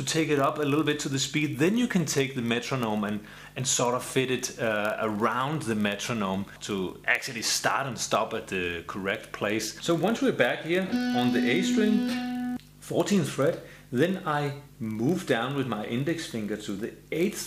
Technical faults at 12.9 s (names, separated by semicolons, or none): block size mismatch (padded)